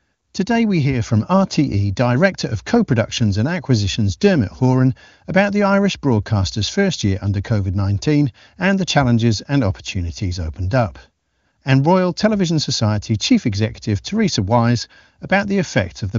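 Nothing stood out on listening; the speech comes through the wideband HD Voice path without any audible problem.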